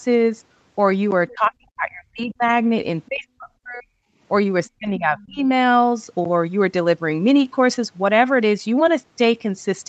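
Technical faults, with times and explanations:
1.11 to 6.25 s, periodic USB or driver dropouts. A short gap of silence cuts into the sound about every 1.02 s, roughly seven times in all. Each gap lasts around 10 ms. The regular spacing points to a background task that stalls the USB bus or audio driver on a fixed cycle. Each stall drops a slice of audio, which is heard as an evenly timed tick or pop. The ticks stand out only where speech is present.
1.30 to 2.45 s, 3.08 to 3.96 s and 4.68 to 5.48 s, speech suppressed in double talk. In each span the speech dips sharply. At its deepest it falls by about 40 dB in the first two spans and about 30 dB in the third. The affected parts add up to roughly a second, then under a second, then under a second again. The likely cause is both sides talking at once. The echo canceller cannot tell the talker from the loudspeaker echo, so it turns everything down.
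4.66 to 4.70 s, other side's voice leaking through. A brief, faint scrap of a second voice slips in, about 35 dB below the main speech. It is very short. This is likely the far side's audio playing from the device's loudspeaker and reaching the microphone. The echo canceller did not fully remove it. The leak lands just as the third suppressed stretch begins.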